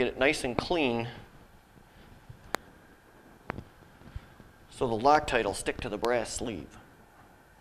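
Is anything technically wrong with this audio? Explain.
Yes. Loud pops at 0.59–0.61, 2.55–2.57, 3.50–3.52 and 6.05–6.07 s, plus a double pop at 5.15–5.30 s. Each is likely a brief voltage spike from a switch, plug or static, peaking around 20 dB over the audio, a little less for the double, and heard as sharp thumps above the continuing sound.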